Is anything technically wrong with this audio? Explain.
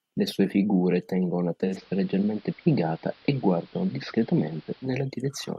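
Yes. From 1.63 to 4.93 s, just after "sue figure tengono la", digital radio blending to analogue: the receiver lost its digital stream and cross-faded over 143 ms to the AM broadcast, then back. The speech turns dull and hissy, with hiss around 30 dB down and the level shifting about 1 dB. A spectrogram shows the upper frequencies thinning and the noise floor lifting for that stretch.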